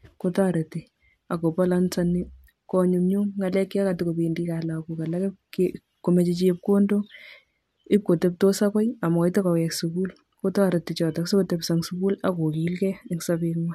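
Nothing in the signal chain of the speech recording goes wrong at any point, so there is no technical fault to describe here.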